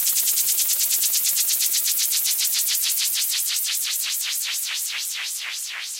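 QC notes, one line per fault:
Nothing to flag here, the everyday sound in this clip comes across with no faults to note.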